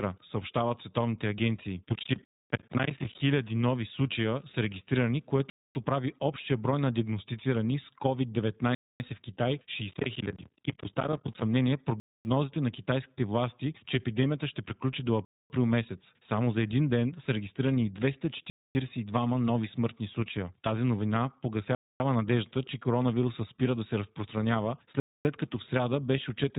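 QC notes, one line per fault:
Throughout, iLBC codec: nothing above 3.8 kHz survives, and each 20 ms frame is coded independently, so speech is clear but rough and synthetic. This fits the 15.2 kbps mode.
1.89–3.20 s and 9.90–11.42 s, processor overload crackle: dozens of missed deadlines, which fits roughly 10 ms buffers, leave hard-edged silent slivers that pile into gritty tearing. The first burst falls between "съобщават световните агенции" and "нови случая са регистрирани".
2.25, 5.5, 8.75, 12.0, 15.25, 18.5, 21.75, 25.0 s, gap between chunks: 250 ms hard-edged holes recur after every 3 s chunk of audio. The last falls between "спира да се разпространява" and "като в сряда беше".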